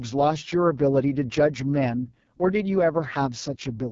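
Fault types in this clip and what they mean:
AMR wideband (HD Voice) codec: the speech runs through a vocal-tract model that rebuilds it from pulses, and here the damage is heavy, rough and raspy throughout, which fits the codec's lowest 6.6 kbit/s mode. Nothing reaches above about 7.4 kHz.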